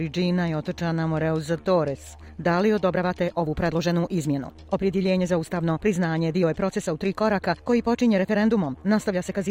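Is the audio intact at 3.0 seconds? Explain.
No. A time-stretched section runs from 2.80 s to the end at 9.51 s. The pace jumps to about 1.43 times faster while the pitch stays put. It sounds rushed, likely from software dropping short slices to shorten the audio.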